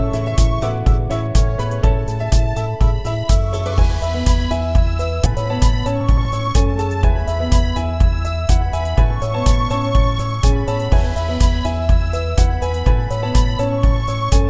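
At 5.26 s a skip ahead drops roughly 0.7 s of audio. Playback jumps straight to later material with no gap, leaving an abrupt splice line on the spectrogram. From 5.85 to 6.57 s, a jitter buffer speed-up trims short pitch-period pieces, some 40 ms in all. The sound runs about 5% faster at unchanged pitch, and the waveform periods keep their length. Throughout, the spectrogram stops at 8 kHz, the band edge of the G.722 call path.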